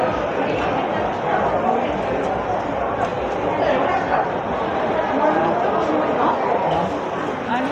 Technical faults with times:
none

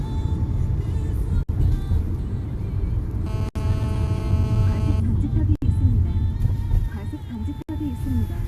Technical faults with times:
1.43-1.49 gap at a join of encoded pieces
3.26-5.00 GSM phone buzz
3.49-3.55 gap at a join of encoded pieces
5.55-5.62 gap at a join of encoded pieces
7.62-7.69 gap at a join of encoded pieces

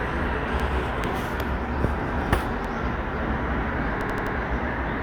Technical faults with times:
0.60-0.68 repeated buffer
2.65-2.73 repeated buffer
4.01-4.35 repeated buffer

